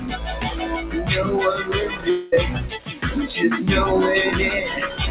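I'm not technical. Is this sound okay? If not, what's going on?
No. Two problems stand out.

The first runs through the whole clip: a noise suppressor applied to music or sounds. A noise-reduction stage built for speech treats held tones, room ambience and echo tails as unwanted noise and turns them down a little, then lets them back up when a sharp onset comes through. The result is a mild but constant pumping, with sustained parts dipping and recovering and the sound seeming thinner between attacks.

The second is brief, from 2.1 to 2.34 s, about a quarter of a second. The audio there is not real; instead the preceding sound is stretched into a buzzy or hissy tail that fades out, and then the clip resumes with that stretch simply missing. This pattern is most likely a long network dropout, where the receiver had nothing to play and filled the gap itself.

The call link also keeps nothing above 4 kHz, which is why the whole clip sounds somewhat muffled, like a phone line.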